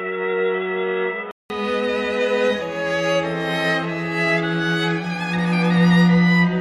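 From 0.0 to 1.5 s the sound is band-limited, with nothing above 3.8 kHz, boxy and roughly 5 dB quieter, with a faint noise floor. A silence of about 0.19 s then precedes fuller sound, likely an input switched to a poorer device and back.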